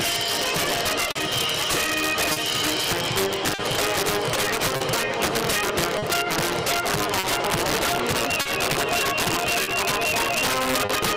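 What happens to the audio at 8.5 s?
Integer overflow runs through the whole clip, including 8.5 s. Loud peaks driven about 8 dB past the limit wrap to the opposite sign, producing violent cracks far harsher than clipping on a small share of samples.

Clock drift between sender and receiver is also present throughout. The sender runs about 3% slow, so the receiver's buffer drains and it repeats short pieces or briefly runs empty, causing uneven timing hiccups.

Scattered short gaps fall between 1.11 and 10.9 s, which includes 8.5 s. There are about ten lost or late packets, the longest around 40 ms, each patched by extending the last sound into brief ticks or smears.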